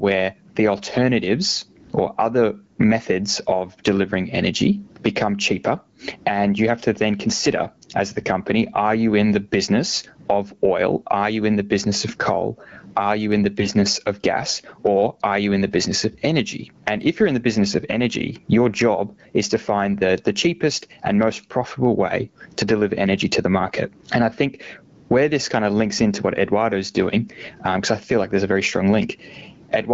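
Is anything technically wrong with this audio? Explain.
Yes, there are two faults.

The first is gain pumping, present across the whole clip. The level swings by about 25 dB. The likely cause is input gain set far too high, with a fast limiter or compressor pulling it down on every peak and releasing in the gaps. Loud and quiet passages end up squashed close together.

The second is a burst of AMR bit errors, from 13.58 to 13.69 s, between "in the" and "of gas". That stretch fits about five coded frames. Around one bit in twenty arrived flipped in the weakly protected part of each frame. The frames still decoded, but the excitation pulses and fine pitch, gain and spectral values came out wrong. Pitch and loudness roughly hold. The sound turns briefly hoarse, scratchy and gargly. Around it, the wideband codec sounds consistent with a 12.65 kbit/s mode, with only light coding roughness.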